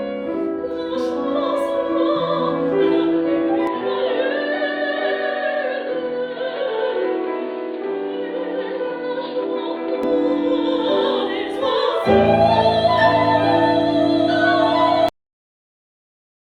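Input switched to a poorer device, from 3.67 s to 10.03 s: the sound abruptly turns dull and boxy, with nothing above 4.7 kHz, a drop of around 5 dB, and a new noise floor roughly 30 dB down, with no gap at the change. The likely cause is the recording system swapping to a narrower-band microphone or headset profile, then switching back.

Cut-off end at 15.09 s: the audio halts mid-sound and falls straight to digital silence with no natural decay, because the final buffers were never written out, leaving the remaining stretch to the end empty.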